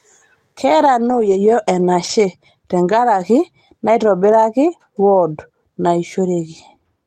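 Lost packets rebuilt from error correction at 1.05–1.27 s and 2.03–2.13 s, just before "tenkaraki neitobiraki wod": the decoder played low-bitrate backup copies, so there is no gap, but the speech turns briefly rough and noisy.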